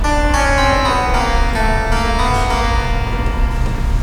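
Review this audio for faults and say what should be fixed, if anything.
Nothing here needs fixing; I listened through this sound recording and didn't catch a single problem worth flagging.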